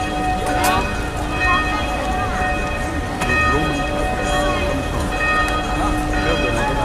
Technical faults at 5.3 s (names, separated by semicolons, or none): none